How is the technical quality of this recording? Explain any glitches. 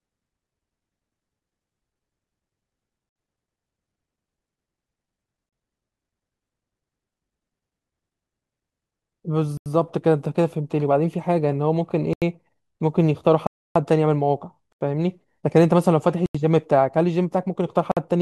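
The speech is interrupted by blocks of digital silence at 3.09, 5.49, 9.57, 12.13, 13.47, 14.72, 16.26 and 17.92 s. The audio drops abruptly to silence and returns. Gaps run 37 to 287 ms. The four 85 ms holes fit unfilled 4096-sample output buffers.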